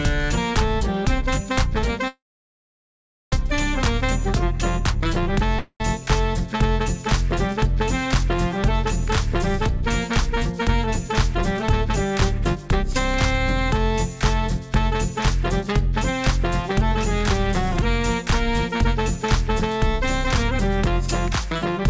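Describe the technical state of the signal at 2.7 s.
Silence at 2.7 s, within a call audio freeze from 2.08 to 3.33 s, likely from delayed packets draining the jitter buffer; playback then resumes about 1.24 s late, nothing lost.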